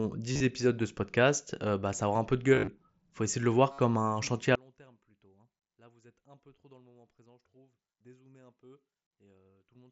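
Voice packets between the Bluetooth headset and phone were dropped in three places, and the receiver covered each gap by repeating the best-matching recent stretch of waveform. This is concealed Bluetooth headset packet loss. At 0.33 to 0.40 s, just before "épisodes de ce podcast", about 60 ms went missing in runs of up to 30 ms. At 2.54 to 2.68 s, after "aura un peu de", roughly 98 ms was lost over 135 ms, with runs up to 38 ms. At 3.72 to 3.79 s, between "essayer de le voir" and "un chantier à", about 60 ms was lost. Each patch is a brief buzzy, held tone with a slight warble as real sound resumes.

From 4.55 s to the end, the sound drops by about 31 dB and turns faint, as if the centre of the image has cancelled. The likely cause is one channel inverted in polarity, so content common to both sides cancels in the mono sum and only the small difference between channels survives. The wideband mSBC headset link adds a light graininess on loud sounds.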